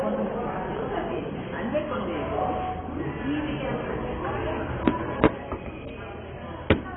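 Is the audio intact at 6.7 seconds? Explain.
No. At 6.7 s, as across the whole clip, the sound bears the marks of what is likely heavy AAC compression. The encoder appears to have been starved of bits, consistent with roughly 16 kbps AAC-LC, so it discarded everything above about 3.8 kHz and coarsely quantised what remained. The result is a dull, band-limited sound with a smeared, warbling texture on sustained sounds and a fizzy edge where high detail should be.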